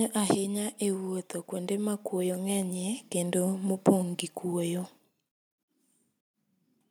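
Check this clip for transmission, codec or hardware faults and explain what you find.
There is one fault, automatic gain rising. From 0.78 to 3.91 s, the level climbs by about 7 dB. The gain control judged the input too quiet and raised its gain slowly. Voice and background swell together, settling before "gi kuoyo".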